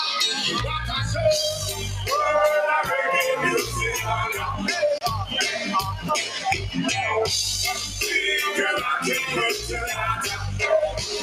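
At 4.98 to 5.01 s the output buffer was apparently not filled in time, leaving a 30 ms block of digital silence, a short hole. From 6.27 to 6.43 s the noise suppressor mistook part of the sound for noise and pulled it down by about 5 dB for roughly a sixth of a second, so it briefly sinks.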